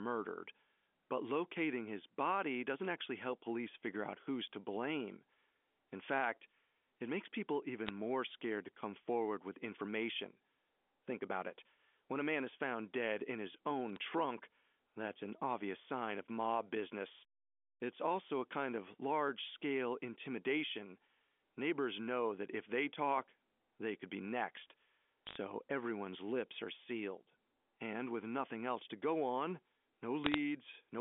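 Bit errors on a digital phone line crackle at 7.87–7.90 s, 13.96 s, 25.27–25.37 s and 30.24–30.38 s. A small fraction of bits flipped, each corrupting one sample, and hits on high bits give sharp ticks. They show as single-sample waveform spikes and thin vertical spectrogram lines across the 250–3400 Hz telephone band.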